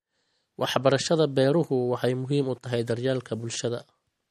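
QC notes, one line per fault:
Throughout: MP3 compression, likely the cause of the clearly audible damage. The speech has nothing above 13.1 kHz, and quiet spectral detail flickers in and out between frames, giving a watery, swirling texture and chirpy, metallic s sounds. The damage points to a low bitrate, which fits roughly 48 kbps. The flickering texture sets it apart from a simple low-pass filter, which would dull the top end but leave the remaining sound steady.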